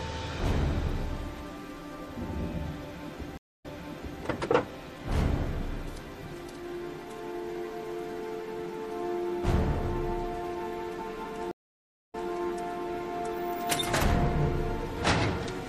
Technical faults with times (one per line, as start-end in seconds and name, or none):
0.00-15.68 MP3 compression
3.37-4.22 stream reconnect
11.51-12.28 stream reconnect